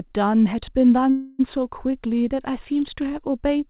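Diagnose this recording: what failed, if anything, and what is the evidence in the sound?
A call audio freeze sits between 1.1 and 1.41 s. The last sound gets stretched out as a fading buzz for about 0.29 s, then the speech carries on right where it left off, with nothing actually cut out, just a gap pushed in. That points to the network and jitter buffer stage: packets likely got held up in transit, the buffer ran dry, and the receiver papered over the hole until they showed up. The narrowband sound, with nothing above 4 kHz, fits a G.711-style call codec.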